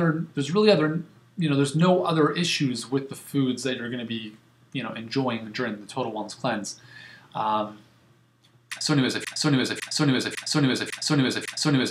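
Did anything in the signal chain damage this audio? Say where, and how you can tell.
Yes: a broken-record loop runs from 9.25 s to the end. One 0.55 s fragment repeats exactly, back to back, five times, replacing the sound that belonged there. The likely cause is a stalled player, encoder or stream resending its last held fragment.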